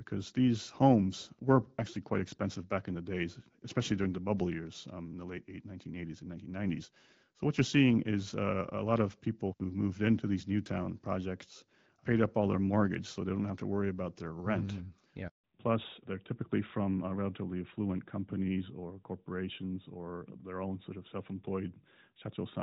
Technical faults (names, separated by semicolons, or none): handover gap; fallback to narrowband